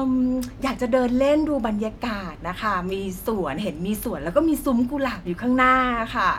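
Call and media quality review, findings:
No faults found in the speech audio.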